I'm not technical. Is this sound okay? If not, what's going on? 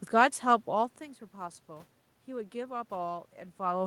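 Yes, it's fine: the background noise is just the room the microphone was in, and the voice getting quieter or louder around half a second in and again near the end is only the person shifting position, not a problem with the recording.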